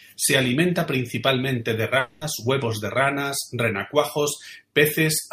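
At 1.99 s the speech breaks off and, until 2.23 s, is replaced by a buzzy, hissing continuation of the last sound that gradually fades. When the speech returns, about 220 ms of it is simply gone. This is a long network dropout, likely caused by a stretch of packets that never arrived, with the receiver filling the hole. Unlike a brief packet loss, which leaves a tiny click or smear, this fill is long enough to be heard decaying.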